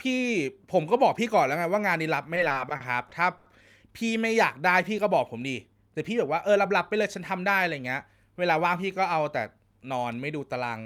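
From 2.35 to 3.48 s, late packets repeatedly emptied the jitter buffer, causing repeated stalls (stutter): eight gaps, about 210 ms in all (longest 90 ms), were filled by stretching the speech, which drags and stutters. From 6.56 to 7.39 s, a jitter buffer speed-up trimmed roughly 50 ms of excess buffered audio, so the speech runs about 5% faster at unchanged pitch and sounds slightly hurried.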